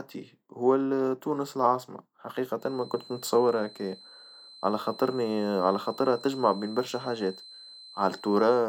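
A speech recording with a feedback whistle. From 2.55 s, just after "تونس العاصمة", a thin, steady tone at 4.1 kHz sits about 20 dB under the speech until the end. It swells and fades slowly in level. The likely cause is a loudspeaker-to-microphone loop held at the edge of feedback.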